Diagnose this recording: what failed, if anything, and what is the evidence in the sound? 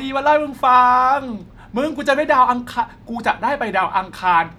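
Nothing failed here: the speech runs without any dropout, glitch, distortion or other audible fault from any stage of the chain.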